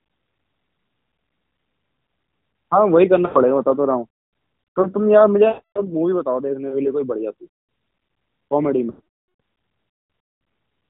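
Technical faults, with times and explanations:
3.26 to 3.39 s, 5.48 to 5.82 s and 8.90 to 9.40 s: lost AMR speech frames. The speech is drawn out and fades to silence because the decoder repeats its last good settings with falling gain. The gaps, 100, 280 and 500 ms, fit runs of 20 ms frames.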